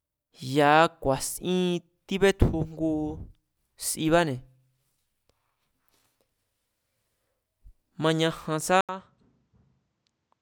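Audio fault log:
8.81–10.41 s, input switched to a poorer device: after a silence of about 80 ms the speech turns duller and drops roughly 10 dB, with a new noise floor about 50 dB down, likely a change to another microphone. On a spectrogram, energy above 8.6 kHz vanishes and a gap precedes a lower waveform.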